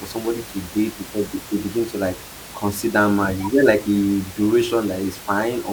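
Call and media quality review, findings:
Nothing to flag on this speech clip; the only thing in the background is some ordinary room noise sitting about 17 dB under the talker, which belongs to the recording space rather than the system.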